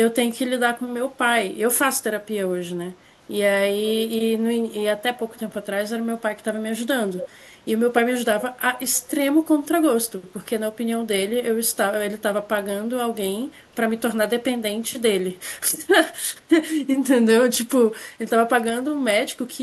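Echo leak at 5.31–5.40 s and 7.20–7.27 s: a copy of the speech returns about 262 ms late, faint at first, then much louder, roughly 10 dB under the voice. A loudspeaker's echo canceller likely failed to remove everything the microphone picked up.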